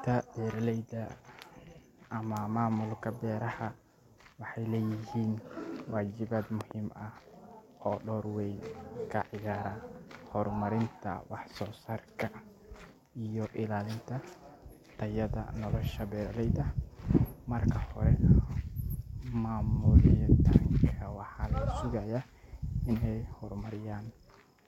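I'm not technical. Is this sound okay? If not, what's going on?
No. At about 6.61 seconds, something in the recording chain most likely received a sudden jolt of electricity, such as a plug being nudged, a switch flicking or a burst of static. That jolt gets added straight onto the audio, producing a loud pop: two sharp thumps in quick succession, ending by about 6.73 seconds, and clearly louder than the speech. The speech itself carries on underneath without a break.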